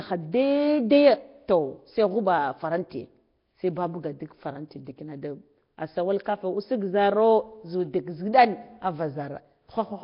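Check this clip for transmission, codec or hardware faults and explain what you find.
One codec fault is present, and it lasts the whole clip. Nellymoser compression runs from start to end. The speech sounds rough and hissy, with a smeared, underwater blur. Nothing is heard above 5.3 kHz. The likely cause is the Nellymoser Asao codec at a bitrate near 22 kbps. So few bits leave quiet bands empty, and noise fills them in.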